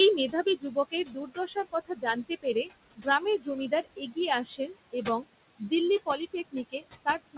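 Noise suppressor artifacts run through the whole clip. The suppressor pulls the room noise, which sits about 14 dB under the speech, down by about 19 dB between phrases, so the floor pumps. A spectrogram shows the noise floor dropping in the gaps, all below the 4 kHz ceiling left by a narrowband call codec of the G.711 kind. From 0.31 to 5.24 s, and again from 6.06 s to the end, there is speech cut by the noise suppressor. It mistakes quiet parts of the speech for noise and turns them down by up to about 20 dB, roughly one and a half seconds in total in the first stretch. Soft consonants and word endings sound swallowed. The waveform shows abruptly shrunken tails, and the spectrogram shows faint or missing high-frequency consonant energy.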